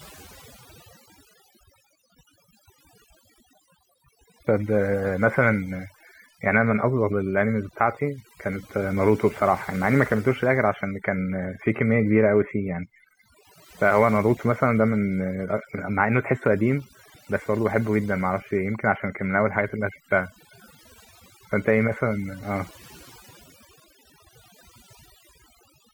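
Across the whole speech clip, overdone noise removal has stripped out far more than the noise, leaving the gaps nearly silent yet speckled with twinkling tones. Quieter bands of the voice were cut too, unlike a gate, which mutes everything at once.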